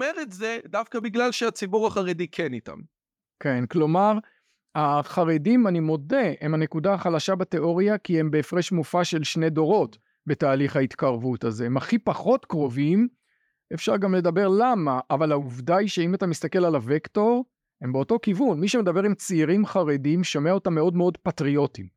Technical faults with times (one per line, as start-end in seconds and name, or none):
1.02 microphone volume stepped up